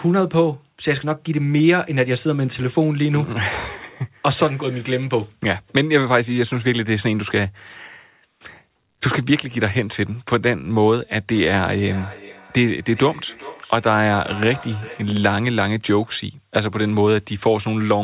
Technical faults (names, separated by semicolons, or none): feedback echo between two devices